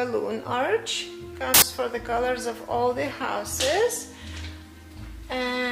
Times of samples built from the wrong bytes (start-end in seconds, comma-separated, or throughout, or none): 1.54-1.62